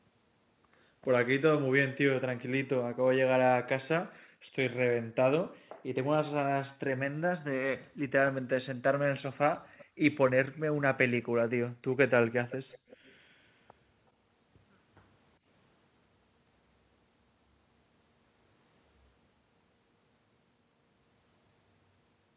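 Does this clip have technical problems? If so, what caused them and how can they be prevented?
Yes. The background is gated by the echo canceller at 2.88–3.04 s, 4.22–5.15 s, 5.75–5.79 s, 9.85–9.99 s and 10.68–11.9 s. The room sound drops by about 40 dB, then returns. The canceller clamps the microphone while the loudspeaker plays. Gentler suppression settings or a headset would prevent this.

There is also an echo leak. A faint delayed copy of the speech trails by 0.39 s at 9.65–10.6 s and by 0.37 s at 12.5–13.13 s. The likely cause is an echo canceller that failed to remove loudspeaker sound from its microphone. Using a headset, or better echo cancellation on the loudspeaker side, prevents it.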